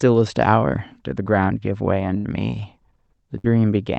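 At 2.17 to 2.27 s and again at 3.38 to 3.47 s, the speech hits a burst of packet loss on the call path. The receiver stretches the last sound for about 60 to 70 ms, so it fades as a held buzz or hiss, then jumps ahead with roughly 60 ms of speech gone. Unlike a plain dropout, there is no true silence, and the timing skips forward instead of pausing.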